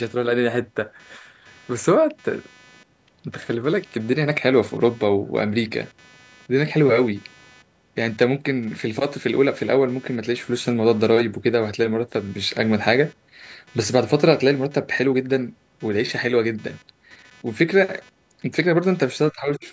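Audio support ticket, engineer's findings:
Computer activity noise, whole clip: buzzy, chirpy pulsing at roughly 300 Hz, sitting around 30 dB under the speech. Tracks machine load, not the talker. Processor or GPU current swings bouncing the shared audio ground. Check grounding, try USB isolator.

Speech dips 19.31 to 19.65 s, down roughly 15 dB across about 300 ms, likely speech suppressed in double talk. Echo canceller can't split near talker from far-end echo, ducks both. Band tops out at 8 kHz, as the call path expects.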